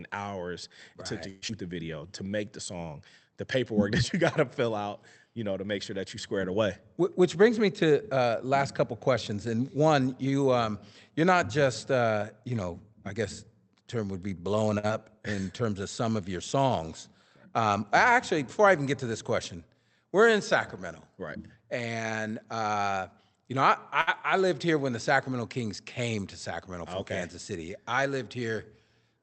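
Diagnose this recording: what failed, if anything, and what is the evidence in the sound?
Long network dropout, 1.29 to 1.51 s, just after "right it took to": the speech is smeared into a fading buzz for about 0.19 s, then resumes with about 80 ms gone. The likely cause is a network outage, with the receiver's concealment extending the last sound.

Jitter buffer slow-down, 1.73 to 2.72 s: the speech plays at 94% speed with unchanged pitch, adding 72 ms. The receiver repeated pitch periods to rebuild its buffer reserve, so sounds come out drawn out.

Jitter buffer speed-up, 7.00 to 9.32 s at 105% (roughly 150 ms removed) and 18.92 to 20.12 s at 104% (around 50 ms removed): the speech is hurried at normal pitch. The buffer held excess audio and trimmed pitch periods to cut the delay.

Short stall from a late packet, 14.79 to 14.85 s after "term would be blowing", and 24.01 to 24.09 s between "uh you know I" and "I lived here when": a sound is held 48 ms and 61 ms respectively. 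The buffer ran empty, stretched the audio until the packet arrived, and lost nothing.

Short concealed packet loss, 14.87 to 14.91 s: a brief smear right after the first stall, where 20 ms of audio never reached the Opus decoder. Concealment continued the preceding sound for about 19 ms and blended back into the real signal.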